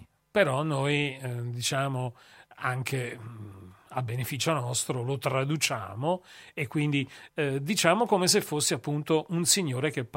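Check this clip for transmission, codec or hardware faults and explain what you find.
No transmission, codec or hardware faults were found.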